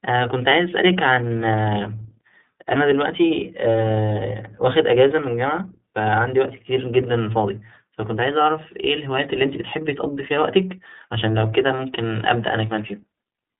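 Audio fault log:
throughout: iLBC codec. The speech is confined to a narrow telephone band of roughly 150 Hz to 3.7 kHz, and a spectrogram shows a hard ceiling with nothing above 3.8 kHz. Each 30 ms block is coded independently, so the excitation sounds a little rough and synthetic, with plainly audible codec damage, a texture that fits the 13.33 kbps mode.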